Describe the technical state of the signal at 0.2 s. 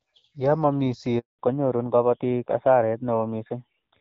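At 0.2 s the speech is intact, with no fault present; it is carried by the AMR wideband (HD Voice) codec, which at this point sounds clear.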